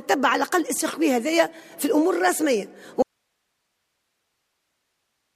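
An audio dropout to a faint residue occurs at 3.03 s: the sound cuts off abruptly and never returns, leaving only hiss about 55 dB below the signal, likely from the source being lost while the path stayed live. On a waveform the envelope collapses to a thin flat band; a spectrogram shows energy vanishing into a uniform low noise floor.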